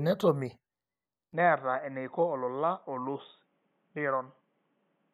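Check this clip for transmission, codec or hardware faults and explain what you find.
One fault is present. At 1.33 s the input likely switched to a poorer device, and it stays there to the end. The new path passes nothing above 3.8 kHz. Speech turns dull and boxy at once, with no gap. Level drops about 10 dB, and a faint new noise floor appears.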